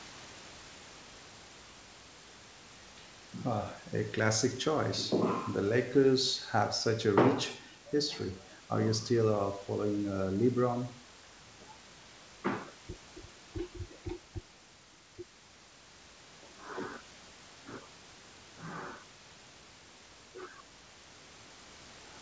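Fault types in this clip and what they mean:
The speech comes through a call path whose band stops at 8 kHz, which fits a wideband codec such as G.722, with room noise sitting about 26 dB below the speech.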